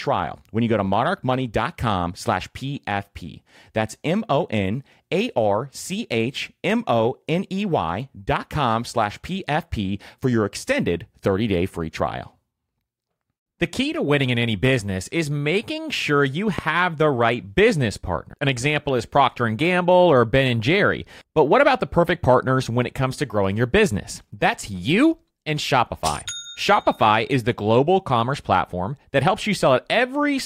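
A brief surge of voltage, most likely from a switch, a plug being disturbed, a static discharge or a driver glitch, entered the signal chain between 16.59 and 16.61 s, just after "is making sure you" and before "the right business partner". The loud pop is a single sharp burst of about 25 ms, peaking around 15 dB above the speech, and the speech can be heard continuing underneath it.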